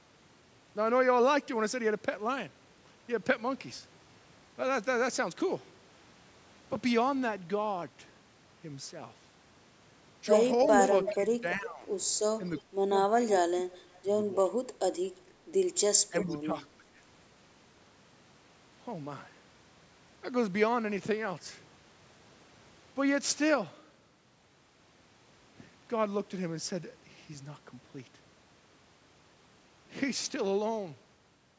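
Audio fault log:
10.64–11.15 s, 12.58–12.62 s, 13.71–14.02 s, 16.21–16.35 s: echo leak. A far-end echo canceller likely let loudspeaker pickup return, so a copy of the speech comes back about 350 ms late, between about 5 and 30 dB below the original.
11.14–11.87 s, 12.63–13.51 s, 16.1–16.83 s: speech suppressed in double talk. With both sides speaking, the canceller likely ducked the talker along with the echo, so the speech drops by roughly 10 to 25 dB in short stretches.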